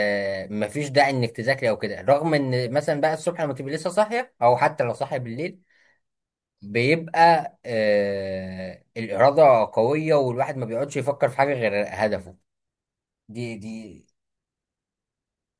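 No technical faults can be heard anywhere in the speech recording, and the signal stays steady and continuous throughout.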